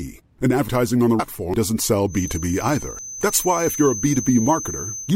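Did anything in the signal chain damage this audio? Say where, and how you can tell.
Yes. At 0.68 s, 1.54 s and 2.99 s the speech jumps forward with no gap, each time losing roughly a tenth of a second. This is a dropped buffer (overrun), likely at the driver or buffer stage: the capture software fell behind and the hardware overwrote a block before it was read. The clean butt-join of raw samples, with no silence in between, marks it as a buffer loss.

At 1.18 to 1.20 s there is a different jump. About 400 ms of speech vanishes. That points to compressed frames skipped at the codec or storage stage. A loss this size fits about fifteen 26.1 ms frames missing from the file or rejected by the decoder.

From 2.06 s to the end, a thin whistle at 6.2 kHz sits about 10 dB under the speech and swells and fades slowly in level. This is a feedback whistle, likely from an acoustic loop where a loudspeaker feeds back into the microphone just short of runaway. 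A fixed single pitch that never swells into a howl separates it from runaway feedback. That it starts partway through, instead of being present from the beginning, separates it from steady electrical interference.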